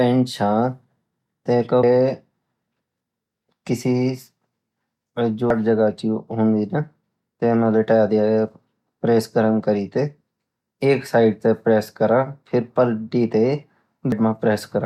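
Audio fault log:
1.83 s, 5.50 s, 14.12 s: damaged data in a compressed stream. Each is a brief chirp or blip in the speech. Corrupted bytes made the decoder misread the frames there. It lost sync and had to search for the next frame header.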